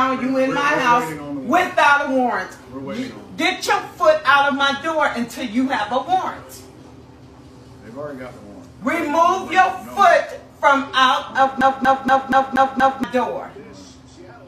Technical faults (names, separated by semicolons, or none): CD stuck on one turn